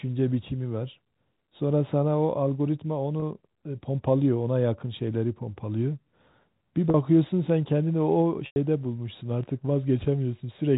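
At 3.20 to 3.22 s, 6.90 to 6.94 s and 8.46 to 8.56 s the speech briefly holds on a buzzy, frozen tone. The first two are short stalls, and the 100 ms one at 8.46 s fades toward silence before speech cross-fades back. This is packet loss with pitch repetition: gaps of 20, 40 and 100 ms, fitting one, two and five 20 ms packets, were bridged by repeating the last pitch period over the band-limited G.711 telephone audio.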